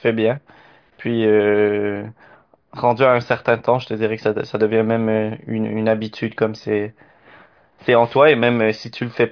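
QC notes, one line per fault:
No faults were heard in this speech recording. There is nothing to log for this clip.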